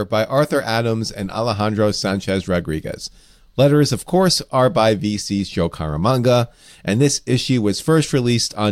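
No technical faults can be heard anywhere in the speech recording, and the signal holds steady throughout without any audible disturbance.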